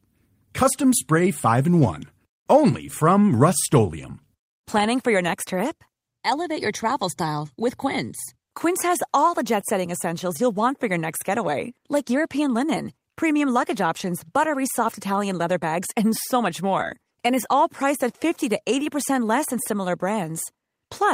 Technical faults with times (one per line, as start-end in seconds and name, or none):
none